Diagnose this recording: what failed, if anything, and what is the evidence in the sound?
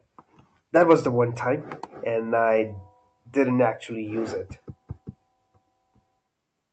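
Nothing failed in this recording.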